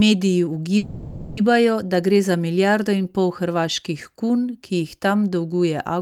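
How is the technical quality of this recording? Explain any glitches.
The recording has one glitch, a call audio freeze. From 0.77 to 1.39 s the sound stalls into a fading buzz or hiss for about 600 ms, then resumes at "da gre za milijardo" with nothing lost. Packets were likely delayed, emptying the jitter buffer, so the receiver stretched the last sound until they arrived.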